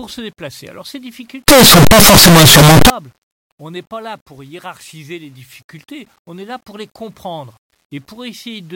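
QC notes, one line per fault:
1.48 to 2.90 s, signed and unsigned mixed up: 8-bit samples were likely read with the wrong signedness, so zero crossings jump full range, giving loud, harsh distortion even in quiet parts.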